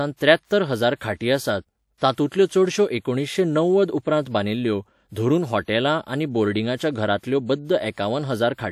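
A brief hiss smears in ahead of sharp speech onsets at 0.45, 0.97, 1.97, 2.13, 7.18 and 7.92 s, each lasting 42 to 55 ms and softening the attack. This is pre-echo: the codec spread quantisation noise across each block, filling the quiet before the onset.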